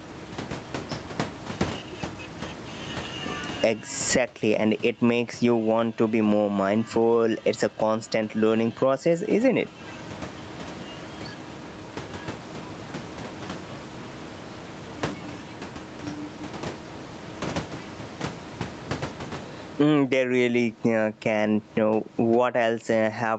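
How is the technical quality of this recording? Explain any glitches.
The recording suffers from gain pumping throughout the speech. The likely cause is input gain set far too high, with a fast limiter or compressor clamping down on every loud syllable. The room noise sits about 32 dB below the speech, and the gain swings by around 20 dB. Loud and quiet passages are squeezed together, so the speech sounds flattened. The call's microphone filtering, which stops near 8 kHz, is normal.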